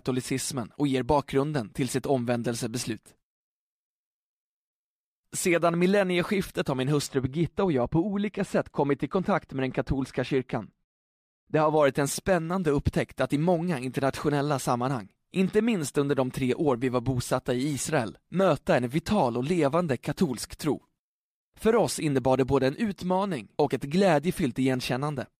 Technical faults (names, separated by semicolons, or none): de-emphasis applied wrongly